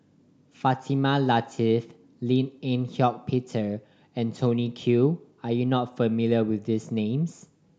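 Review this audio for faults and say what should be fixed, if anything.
Nothing needs to be fixed, as no faults can be heard in this audio.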